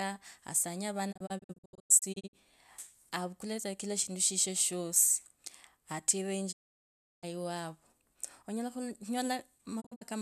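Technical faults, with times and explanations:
1.11–2.35 s, 6.51–7.25 s and 9.80–10.03 s, digital broadcast dropout: the receiver lost good frames and muted, fading out over 20 ms. The first and last are scattered short holes (longest 96 ms and 48 ms); the middle one is a solid gap of about 0.7 s. That audio is just gone.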